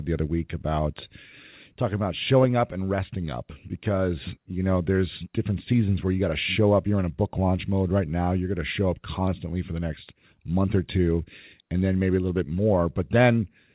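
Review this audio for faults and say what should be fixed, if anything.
Nothing here needs fixing: the speech has passed through a G.711 mu-law call path at 64 kbps, which carries nothing above 4 kHz, and the audio shows no faults.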